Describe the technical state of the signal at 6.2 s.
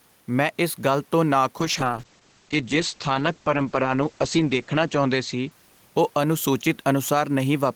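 At 6.2 s the call is in a bitrate drop, running from 1.61 s to 6.45 s. The encoder was cut from 32 kbps to 9 kbps and its bandwidth narrowed from 20 kHz to 8 kHz, bottoming out for about 3 s. The speech sounds coarse and muffled, lacking its upper frequencies.

Gain pumping runs through the whole clip, likely from input gain set far too high with a fast limiter clamping each loud sound. Level swings by around 5 dB, and the room noise sits about 40 dB under the speech.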